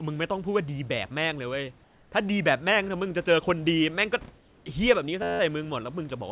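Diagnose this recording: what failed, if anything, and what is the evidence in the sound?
Comfort noise in place of the background appears at 1.84 to 2.12 s and again at 4.38 to 4.66 s. Each gap lasts 280 ms. The real room background drops out. A steady, featureless hiss replaces it, about 3 dB quieter. The stage is call processing. The likely cause is discontinuous transmission, with the receiver synthesising noise during pauses.

A system hang loop runs from 5.22 to 5.40 s. One 11.6 ms slice of audio repeats about fifteen times. It sounds like a flat buzz at 86 Hz. The stage is the driver or buffer. The system froze while the hardware kept cycling its ring buffer, which fits a 512-sample buffer.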